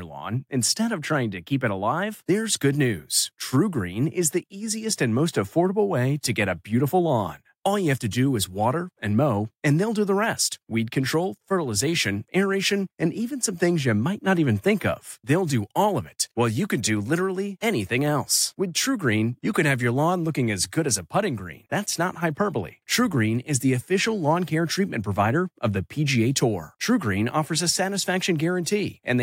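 No technical faults are audible anywhere in the speech recording.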